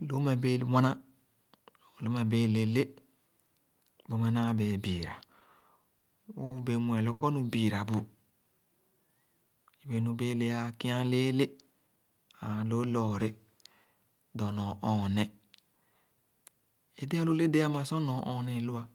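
Late packets repeatedly emptied the jitter buffer in this speech recording, causing five short stalls from a late packet at 5.39–5.43, 5.59–5.63, 5.99–6.05, 6.45–6.53 and 7.13–7.23 s. Each holds a sound too long, by 20, 20, 40, 60 and 80 ms, with nothing lost. A jitter buffer slow-down then rebuilt reserve from 7.95 to 9.20 s, adding 124 ms and stretching the speech to 91% speed at unchanged pitch. Later, a jitter buffer speed-up trimmed surplus delay from 11.11 to 12.63 s, cutting about 150 ms so the speech runs hurried at 111% speed.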